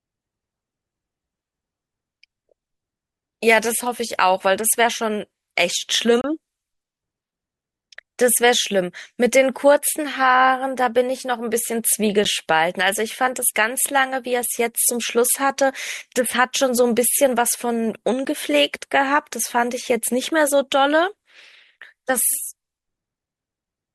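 At 6.21 to 6.24 s and again at 18.25 s the speech drops into a hard-edged silence of about 28 ms and then 15 ms. This is a gap between stream segments: timestamps of adjacent 6-second segments leave a small hole, which the player fills with silence.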